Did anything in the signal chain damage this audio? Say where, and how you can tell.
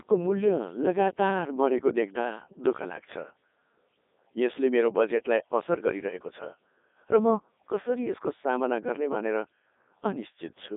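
Yes. The damage sits at the codec stage and runs through the whole speech clip: a Codec 2 vocoder, heavily degrading the sound. The decoder doesn't carry the original waveform. It rebuilds speech from pitch, voicing, energy and a coarse spectral envelope using sine waves, which gives the robotic, buzzy quality heard throughout. The damage is heavy even at the top 3.2 kbit/s mode. On a spectrogram the energy is confined to about 250 Hz to 3.7 kHz, with unnaturally clean, evenly spaced harmonics and missing fine noise and breath texture. The waveform's shape won't match a natural recording, because its phase is synthesised.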